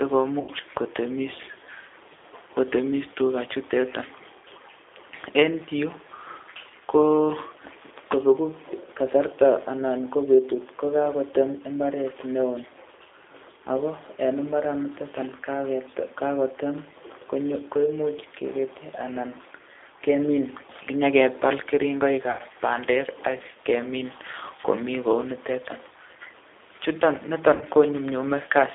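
Speech runs through a G.729 codec for the whole recording. The rough, slightly synthetic texture fits an 8 kbit/s rebuild from a vocal tract filter and sparse pulses. A spectrogram shows energy confined to a 300 Hz to 3.6 kHz band, with nothing above. VoIP packet loss concealed by the speech codec appears at 0.40–0.50 s and 22.31–22.42 s (80 ms lost each) and 27.55–27.64 s (60 ms lost). In each gap the decoder extrapolates from its last pitch and filter into a fading buzzy tone or coloured noise, seen as a decaying waveform envelope.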